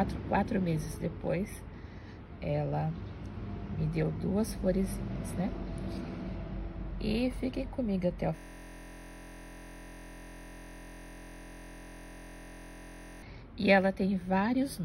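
A system hang loop runs from 8.37 to 13.22 s. The driver or host stalled while the audio hardware kept replaying one 23.22 ms slice, which fits a 1024-sample buffer. That repetition at 43.1 Hz turns the sound into a steady, low, motorised buzz.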